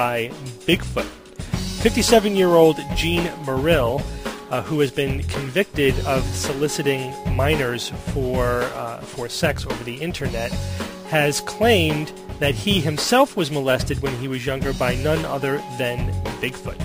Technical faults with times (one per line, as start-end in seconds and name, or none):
none